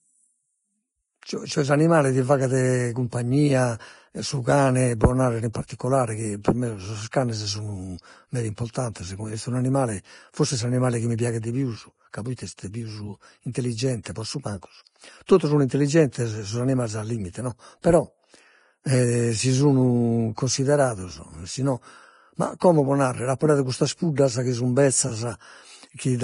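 From start to finish the speech sounds hissy and grainy, with sibilants turned to a rough wash, vowels carrying a coarse, roughened texture and consonant onsets smeared. Nothing is heard above about 10.5 kHz. This is likely Vorbis compression at heavy settings, consistent with a low bitrate of around 30 kbps: the encoder lowered its cut-off and quantised the remaining treble so coarsely that fine detail was swapped for noise of similar energy.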